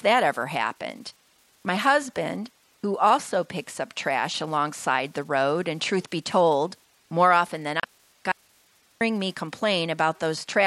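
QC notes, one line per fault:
7.80 to 7.84 s, damaged data in a compressed stream: a short glitch in the speech lasting about 40 ms. A stretch of the coded stream went bad, so the decoder lost sync and hunted for the next clean frame header, then picked up again.
8.32 to 9.01 s, audio dropout to a faint residue: the speech cuts out abruptly for about 690 ms and comes back just as suddenly. The gap isn't silent. It holds a low hiss, roughly 35 dB under the speech level, likely because the signal was lost upstream while everything after the break stayed live.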